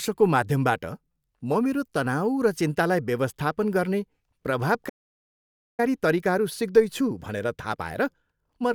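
At 4.89 s the speech cuts out mid-flow and stays silent for about 0.9 s, until 5.80 s. This playback stall was likely caused by the player running out of buffered data or its output thread being blocked.

From 5.80 s to the end, time-compressed catch-up runs the speech about 1.1 times faster at unchanged pitch. The player drains the backlog from the stall by removing short segments and cross-fading the joins.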